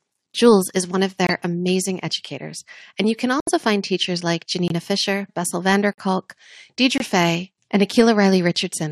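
Corrupted compressed frames in this speech clip were rejected by the decoder and replaced with silence, a corrupt frame muted fault, so the sound drops out abruptly at 1.27, 3.40, 4.68, 5.93 and 6.98 s. Each hole lasts 40 to 90 ms, which fits two or three lost frames, and the timing afterwards stays intact.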